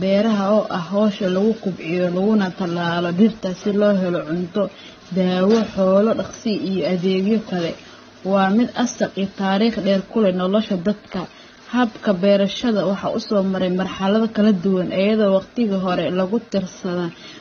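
Throughout, the speech sounds dull, with nothing above 6.8 kHz, and carries two different kinds of swirly, metallic artefacts at once. This points to transcoding between lossy codecs, likely low-bitrate AAC-LC then HE-AAC, each adding its own damage while the lowest cut-off remains.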